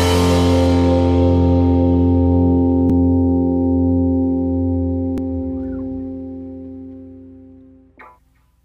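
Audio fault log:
0.68 s, 2.90 s, 5.18 s: likely dropped buffer (overrun). Roughly 10 to 20 ms is skipped without silence, so the sound jumps ahead, seen as waveform jumps.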